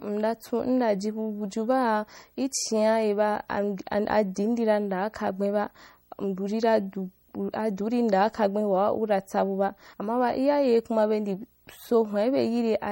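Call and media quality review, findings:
Video or display buzz, throughout: steady buzz at 59.94 Hz with hash above it, plus a 15.7 kHz line-rate tone, around 40 dB below the speech. Picture-field rate, not 60 Hz mains hum.

MP3 compression, throughout: plainly audible watery, swirly texture, metallic chirps on s sounds, smeared attacks. Likely a low-bitrate MP3 encode, consistent with roughly 48 kbps. Distinct from noise because the damage follows the speech.

Dropped buffer (overrun), 9.94 s: audio jumps ahead with no silence, about 50 ms of speech missing, likely from samples being overwritten before capture.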